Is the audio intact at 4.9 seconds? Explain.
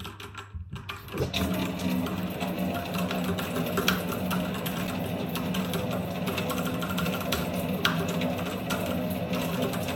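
No. Loose connector crackle runs from 4.84 to 4.98 s, a burst of roughly 0.14 s. A worn or dirty contact in the signal path is shifting, so the connection opens and closes in quick, uneven succession. Each break chops the audio, and any DC offset on the line turns the make-and-break moments into pops. The result is a short, ragged patch of scratchy crackle laid over the sound at that moment.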